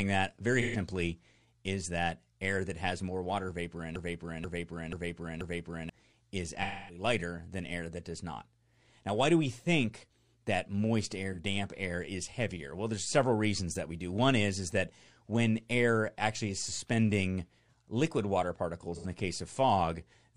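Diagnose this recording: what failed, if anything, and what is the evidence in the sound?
Codec stage: AAC frame loss with concealment at 0.61–0.77, 6.62–7.03, 11.32–11.39 and 18.95–19.06 s. The decoder smeared over the missing frames, leaving brief noisy patches.

From 3.96 to 5.90 s, a 0.48 s fragment plays four times back to back, a broken-record loop, likely from a stalled player or stream.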